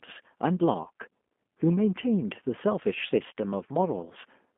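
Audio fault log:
throughout G.729 codec: The speech sounds rough and slightly synthetic, confined to a narrow band of roughly 200 Hz to 3.4 kHz. Low-rate model-based coding rebuilds each frame from a filter, a pitch predictor and a few pulses, which fits an 8 kbit/s G.729A stream.
0.84–0.88 s and 3.29–3.32 s VoIP packet loss concealed by the speech codec: Each is a brief stretched sound that fades, with the speech weak and distorted for a moment afterwards. About 20 ms of audio went missing each time, likely a single packet. The decoder filled the gap by extending its last pitch and filter settings at falling gain.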